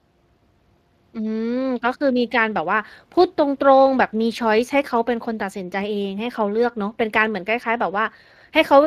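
From start to finish the speech carries plainly audible Speex codec damage, at around 22 kbps. This CELP coder rebuilds each stretch from a predicted excitation, and with limited bits that excitation comes out coarse, so the voice sounds noisy and hoarse. It differs from transform-codec damage such as MP3, which sounds warbly and swirly, because here the graininess is rough and stays on the voice. Nothing is present above 15.3 kHz.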